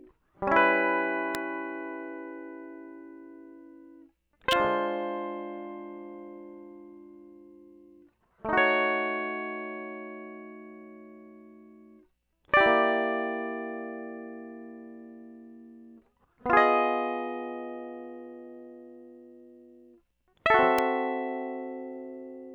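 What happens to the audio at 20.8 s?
At 20.78 s a sharp snap, peaking around -15 dBFS, sits on top of the music, likely an electrical switching spike from a nearby switch; unlike a dropout, nothing is removed.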